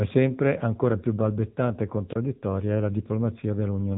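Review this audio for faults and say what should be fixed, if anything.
The speech passes throughout through an AMR narrowband mobile codec. Nothing above about 3.8 kHz survives, and the voice has the buzzy, synthetic edge of a vocal-tract model rebuilt from a few pulses per subframe. The damage is plainly audible, which fits a low AMR-NB mode near 8 kbps. Plain band-limiting would sound muffled but clean, so the buzz identifies the codec. To prevent it, record or route the audio over a wideband path instead of a narrowband mobile link.

A wireless microphone squelch dropout occurs from 2.09 to 2.16 s, between "ancora più balbettante e" and "è la". The weakening radio signal brings a short rise of hiss. The receiver's squelch then cuts the output to near silence for about 27 ms before the voice returns. A digital packet loss would gap cleanly or repeat sound, but here the hiss leading into the hole marks a faded analogue FM link. 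To prevent it, keep the transmitter in clear line of sight and within range of the receiver, and use diversity reception.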